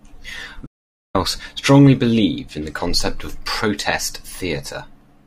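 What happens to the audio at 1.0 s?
At 1.0 s the speech is in the middle of an audio dropout to silence running from 0.67 to 1.15 s, roughly 480 ms. The signal cuts to dead silence with no room tone, then resumes mid-flow, likely because the input was briefly lost while recording continued writing silence.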